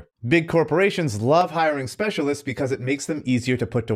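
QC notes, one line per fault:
1.41–3.24 s, channel delay (comb filtering): speech turns hollow and phasey because one channel lags by around 10 ms, cancelling evenly spaced frequencies from around 50 Hz.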